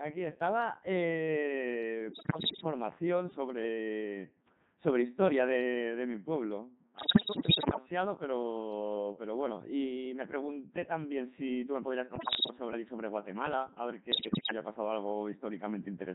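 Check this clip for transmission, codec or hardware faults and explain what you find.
Two faults are present: the speech has passed through a very low-rate vocoder for its whole length, and it also carries bursts of bit-error corruption at four points.

Codec 2 vocoder, throughout: The sound fits Codec 2 at its 3.2 kbit/s mode, and the damage is heavy. The decoder rebuilds the speech from pitch, voicing, energy and a coarse spectral envelope, synthesising it from sine waves instead of keeping the original waveform. The result is robotic and buzzy. On a spectrogram the harmonics look unnaturally regular and smeared, with breathy and noisy detail missing. The waveform no longer resembles natural speech.

Bit errors on digital voice radio, at 2.13 to 2.64 s, 6.98 to 7.78 s, 12.16 to 12.50 s and 14.12 to 14.52 s: The first two bursts point to roughly 10% of bits flipped, and the last two to around 15%. 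Each corrupted bit shifts the pitch, level, voicing or spectral shape of a whole vocoder frame. The speech jumps erratically in pitch and loudness, breaking into bleeps, warbles and synthetic gibberish. A spectrogram shows abrupt frame-by-frame leaps in harmonic spacing and energy. The waveform shows sudden level steps.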